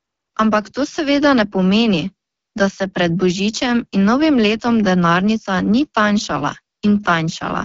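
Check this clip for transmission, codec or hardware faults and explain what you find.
One codec fault runs through the whole speech clip.

AMR wideband (HD Voice) codec, throughout: the speech is rebuilt from a pulse-excited vocal tract model, with noise filling the top band and nothing above 7.3 kHz. The plainly rough, raspy texture points to the 8.85 kbit/s mode, one of the two lowest rates.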